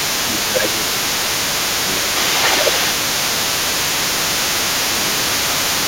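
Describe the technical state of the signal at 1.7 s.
At 1.7 s you're hearing low bit depth with dither, and it runs through the whole clip. Dither was added before the samples were rounded to very few levels, which fits something like a 5-bit signal. The error comes out as a steady, even hiss, no distortion, sitting around 10 dB under the speech.

There's also the other side's voice leaking through, present from the start right to the end. A second voice sits under the talker at roughly 10 dB down. The likely cause is the far end playing from a loudspeaker into the mic, with the echo canceller not removing all of it.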